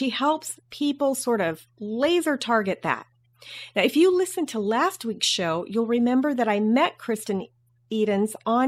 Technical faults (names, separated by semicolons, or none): none